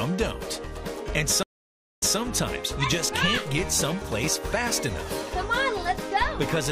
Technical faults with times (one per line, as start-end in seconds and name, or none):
1.43-2.17 stream reconnect